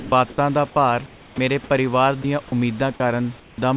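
The opening 0.12 s is missing. Instead of speech there is a flat, steady hiss, and the first audible words, "ਦਾ ਭਾਰ", arrive only after it. This is sound dropped by the voice detector: the sender likely judged those opening moments to be background and stopped sending, so the receiver played synthetic noise for about 120 ms of lost material. The same featureless hiss carries on to 0.38 s, where comfort noise stands in for the real background.

From 1.06 to 1.38 s, just after "ਦਾ ਭਾਰ", the room's natural background gives way again to a smooth, detail-free noise about 8 dB quieter. This is comfort noise in place of the background. The transmitter likely went quiet during the pause, and the receiver generated noise roughly matched to the room, which sits about 26 dB below the loud parts. At 3.4 to 3.58 s the same substitution recurs, this time about 11 dB down.

At the end of that first pause, from 1.32 to 1.38 s, the next speech starts abruptly and its soft lead-in is gone. 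This is onset clipped by the voice detector. The detector was likely slow to register that sound had resumed, so roughly 60 ms of the beginning was never sent and was covered with synthetic noise.

Between 2.22 and 2.52 s the sound turns choppy, with small pieces of speech briefly swapped for flat noise. This is sound chopped by the voice detector, most likely caused by the detector toggling between sending and not sending. About 60 ms in total was replaced.

At 2.96 to 3.0 s a short bite of about 30 ms drops out into hiss. This is a second instance of sound dropped by the voice detector, likely sound the detector mistook for background.

Throughout the clip, the call path's band limit is audible, with nothing above 4 kHz, which fits G.711 A-law at 64 kbps.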